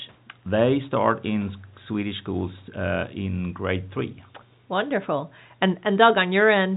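Nothing stood out on listening to this telephone-band speech recording, which carries nothing above about 3.8 kHz, consistent with G.711 telephone coding.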